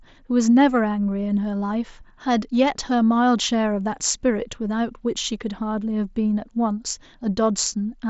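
Nothing technically wrong turns up in this speech clip, which comes over a Bluetooth mSBC headset link doing its usual job.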